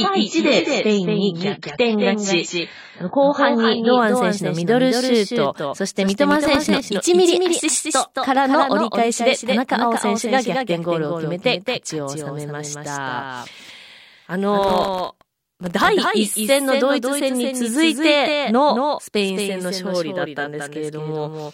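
Right from the start there's a doubled audio track. The whole speech runs twice, with a second full-band copy trailing about a fifth of a second behind and a few dB quieter. It's dry, with no room tail, which is most likely a second capture path or an edit holding two copies out of step.

From 0 to 4 s you can hear an adaptive stream starting at a low bitrate. Nothing comes through above 7.6 kHz and the codec artefacts are stronger. At 4 s the quality jumps up suddenly with no gap, which sounds like a step from roughly 16 to 96 kbit/s AAC.

Processor overload crackle hits twice, from 6.09 to 6.80 s and again, longer, from 14.61 to 15.87 s. It's a gritty tearing made of tiny hard-edged dropouts to silence, which points to deadlines missed on a buffer of well under a millisecond, many times in a row.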